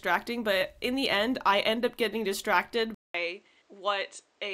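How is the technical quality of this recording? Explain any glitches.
The recording has one glitch. At 2.94 s the speech cuts out for 0.2 s, then returns duller, somewhat quieter and over a new noise floor, with nothing above 8.9 kHz through to the end. This is likely an input switched to a poorer device, whose narrower band, lower gain and own hiss replace the original microphone's sound.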